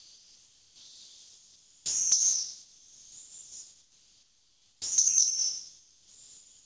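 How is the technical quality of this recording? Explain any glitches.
The recording has repeated transmission gaps in which the real background and parts of the sound are replaced by synthetic noise, all heard through a band limit with nothing above 8 kHz, which points to a wideband call codec.

Comfort noise in place of the background runs from 0.0 to 2.12 s, 2.22 to 4.98 s and 5.28 s to the end. This is likely discontinuous transmission: the receiver fills the pauses with flat, featureless noise that is about 5, 1 and 3 dB quieter than the real background.

Onset clipped by the voice detector occurs at 1.81 to 2.12 s and 4.79 to 4.98 s. The detector was likely slow to react, so 310 ms and 190 ms of the sound's start are missing and each sound begins abruptly.

Sound dropped by the voice detector occurs from 5.08 to 5.18 s. The detector likely mistook the sound for background, so 100 ms gives way to steady noise before the sound returns.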